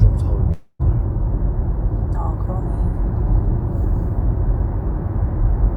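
From 0.51 to 0.81 s there is a call audio freeze: the last sound stretches into a fading buzz for about 280 ms, then goes briefly silent, likely from a stalled jitter buffer. Unlike a dropout, the audio resumes where it stopped, so nothing is lost.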